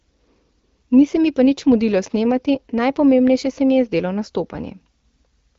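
Nothing technically wrong can be heard in this speech recording. It has the sound of an AMR wideband (HD Voice) link at 12.65 kbit/s, with nothing above about 7.4 kHz and only the light coding texture expected at that rate.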